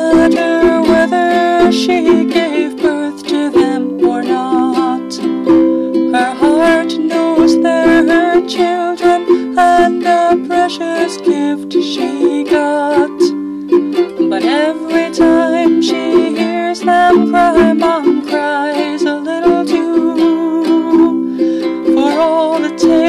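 Hard clipping runs the whole way through: the signal's driven about 10 dB past the limit, so about 4% of samples get flattened, giving a harsh fuzz on loud moments.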